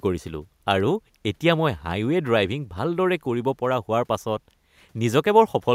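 Listening through the speech, nothing stood out as a technical fault at any point.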